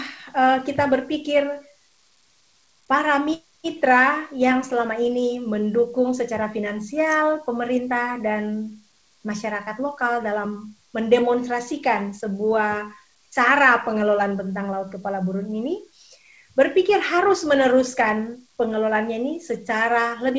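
The audio shows no technical faults; it has passed through a WebRTC call path, and the absence of content above 8 kHz fits a wideband codec such as G.722 working as intended.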